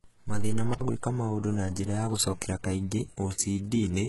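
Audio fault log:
throughout: HE-AAC compression. The speech is likely coded with HE-AAC, and the codec damage is heavy. The sound points to a very low bitrate of around 12 kbps. Only the lower spectrum carries real detail. The treble is rebuilt by copying lower bands upward under a coarse envelope, so harmonics fail to line up across the crossover and s sounds come out gritty or lispy. On a spectrogram the upper region looks like a smeared, repeated copy of the band below, and it stops at a hard ceiling near 11.5 kHz.
0.73–0.81 s: intermittent contact. A loose connection opens for about 64 ms within this span, just before "gwĩka maũndũ na njĩra". The signal drops out and breaks up, with crackle where the contact opens and closes, and hiss fills the gap while the line is open. On the waveform the level collapses into a short low-level patch with sharp spikes at its edges. On a spectrogram those spikes show as thin vertical broadband lines on either side of a faint noise gap.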